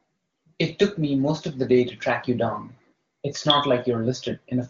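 No technical faults are audible.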